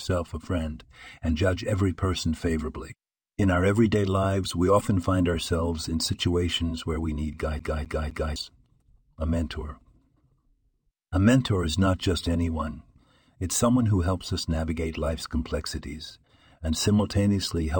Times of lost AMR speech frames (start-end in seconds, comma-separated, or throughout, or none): none